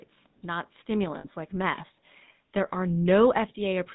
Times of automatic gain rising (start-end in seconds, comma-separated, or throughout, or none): 0.42-1.87